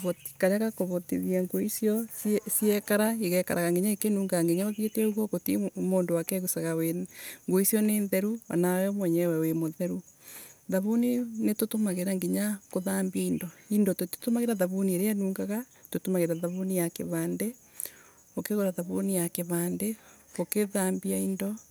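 Speech recording with computer activity noise from 11.75 to 14.66 s: a buzzy, chirping whine pulsing around 1 kHz, roughly 40 dB below the speech. Processor or graphics load shifting the shared ground couples into the audio path, following machine activity, not the voice.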